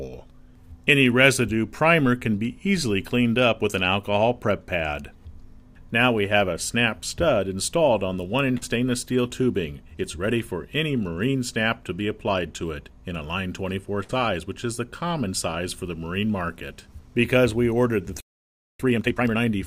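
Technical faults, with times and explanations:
8.57–8.64 s, short concealed packet loss: a brief smear lasting about 40 ms. That stretch of data arrived too late to decode, so the receiver filled it by extending the preceding sound for 41 ms, then blended back into the real signal.
14.04–14.11 s, burst of packet loss: a held, fading fill of about 53 ms, then a slight jump forward. Several packets in a row went missing, about 60 ms of audio. The receiver extended and attenuated the last sound, then resumed past the gap.
18.20–18.80 s, playback stall: the sound stops abruptly and the output stays silent for about 0.59 s before resuming. This was likely caused by the player's buffer running dry or its playback thread being blocked until data arrived again.
18.80–19.38 s, time-compressed catch-up: straight after the silence the audio rushes along at 2.0 times normal speed with unchanged pitch. 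The player is clearing its backlog by cutting small segments out and cross-fading across the joins.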